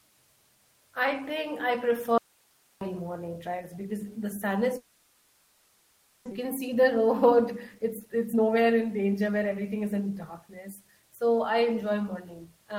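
At 2.18 s the speech cuts out abruptly and returns at 2.81 s. This is an audio dropout to a faint residue. For 0.63 s only hiss remains, about 40 dB below the speech. A momentary signal loss upstream, with the path still live, is the likely cause.

From 4.77 s to 6.33 s there is a long network dropout. The receiver fills the whole 1.54 s with a fading buzz or hiss continuing the last sound, never falling silent. About one second of speech is simply missing. A long stall in arriving packets is the likely cause, adding roughly half a second of delay.

Starting at 6.43 s the speech runs fast until 11.10 s. This is a jitter buffer speed-up. Playback runs at 110% with unchanged pitch, so the talk sounds hurried. Short pitch-period pieces are trimmed repeatedly, removing about half a second in total to shed the built-up delay.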